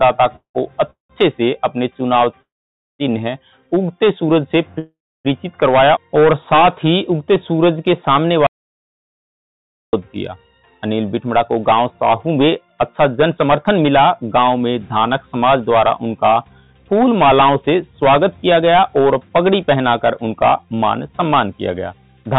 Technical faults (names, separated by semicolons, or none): call audio freeze; jitter buffer slow-down; audio dropout to silence; jitter buffer speed-up